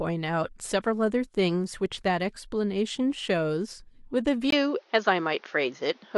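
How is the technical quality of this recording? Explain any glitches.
The recording has one clear glitch. At 4.50 s the sound narrows and stays that way to the end at 6.18 s, with a brief 20 ms gap right at the change. The likely cause is the input switching to a poorer device partway through. Nothing comes through above about 6.7 kHz after that point, so the speech loses its air and turns duller. A new noise floor appears about 35 dB below the signal, while the overall level stays roughly the same.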